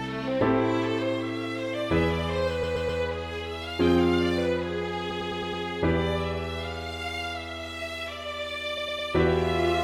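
Repeated frames cause a stutter at 2.62 to 3.01 s, 5.10 to 5.63 s and 8.77 to 9.09 s. A short block of about 128 ms, then about 107 ms at the later two points, replays several times back to back. Unlike a dropout, nothing is lost: the repeats add about 0.38, 0.53 and 0.32 s, and the block lengths point to runs of compressed frames being sent more than once.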